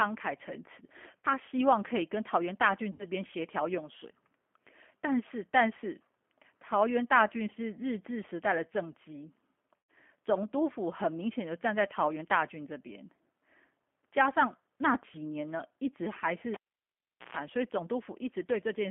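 From the start the speech sounds rough and slightly synthetic, confined to a telephone band of about 250 Hz to 3.4 kHz. That is G.729 codec damage: the speech is rebuilt from a vocal-tract filter, pitch predictor and a few pulses per frame, which fits an 8 kbit/s G.729A coder.

At 1.20 to 1.27 s the speech turns into a short stretched sound that fades, with weak, distorted sound just after. The same happens at 2.93 to 3.06 s and for longer at 9.81 to 9.91 s. This is VoIP packet loss concealed by the speech codec. About 40 ms, 60 ms and 100 ms of audio went missing, which points to two, three and five lost packets. The decoder extended its last pitch and filter at falling gain, and the recovery lags because each frame builds on the one before.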